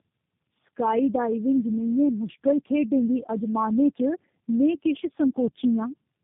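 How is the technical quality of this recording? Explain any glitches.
Technical quality is poor from start to finish, and it all comes down to one fault that runs through the whole clip.

Tandem speech coding, present throughout: the speech sounds like it crossed several phone links, each squeezing it with its own speech codec and then decoding it again at the hand-off. The character points to about three coders in a row, something like two AMR-NB stages and a final G.729A, with plain mu-law links between them. Each stage models speech that's already been mangled by the last, so the errors stack up. The result is rough, muffled and warbly, with nothing above 3.7 kHz, which fits a narrowband telephone path.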